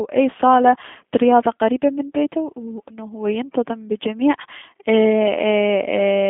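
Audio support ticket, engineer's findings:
G.729 codec, whole clip: speech band-limited to about 150 Hz–3.5 kHz, nothing above 3.6 kHz, plus an audible rough, synthetic texture. This points to an 8 kbit/s CELP vocoder rebuilding speech from a filter and sparse pulses, not simple telephone-line filtering.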